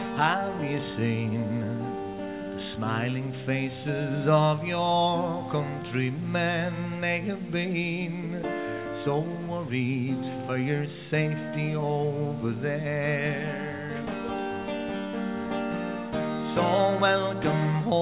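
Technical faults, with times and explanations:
No technical faults can be heard in this recording.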